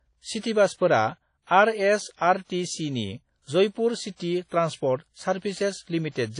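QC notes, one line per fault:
Throughout: WMA compression, likely. Codec damage is plainly audible across the speech, and nothing is heard above 10.1 kHz. Long transform blocks spread quantisation noise over tens of milliseconds, and weak spectral detail is dropped. The damage fits a bitrate around 32 kbps.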